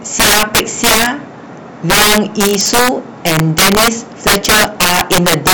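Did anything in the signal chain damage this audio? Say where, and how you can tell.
Yes: loud speech peaks crack violently throughout, harsher than clipping. This is integer overflow at sample-format conversion, where about 13 dB of excess gain wraps peaks to the opposite sign.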